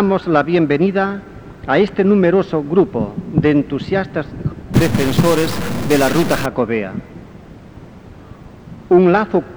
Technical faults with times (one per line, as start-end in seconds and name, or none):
4.74-6.46 stuck bit